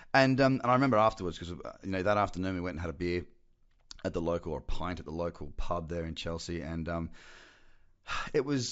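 Speech recording, and nothing in it is technically wrong.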